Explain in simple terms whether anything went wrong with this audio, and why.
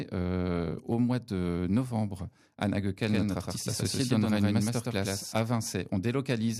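A doubled audio track runs from 3.09 to 5.35 s: the speech plays twice, a second copy about a tenth of a second behind and roughly as loud, giving a clattering echo. Likely something captured the sound again on a slower path, then both were mixed together.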